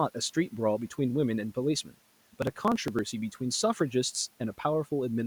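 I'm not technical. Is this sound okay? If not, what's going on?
No. From about 2.25 to 2.99 seconds there is processor overload crackle. The computer got too busy to keep up. It kept missing tiny slices of audio, each around five milliseconds, roughly a dozen or more. Those skipped bits make a gritty, crackling tear.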